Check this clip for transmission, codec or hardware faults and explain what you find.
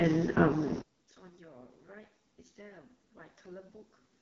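Two faults here: heavy AMR wideband codec damage across the whole clip, and from 0.82 s on the sound collapses in a way that points to one channel inverted.

The AMR wideband (HD Voice) codec runs throughout at 6.6 kbit/s, its lowest rate. At that rate the pulse-driven model of the speech is starved of bits, so the speech comes out rough and raspy, and nothing reaches above 7 kHz.

From 0.82 s to the end, the level drops by about 33 dB and the speech nearly vanishes, leaving only a faint trace. That's the classic signature of one channel with reversed polarity being summed to mono: the matching content in both channels cancels out. An inverted channel is the likely cause.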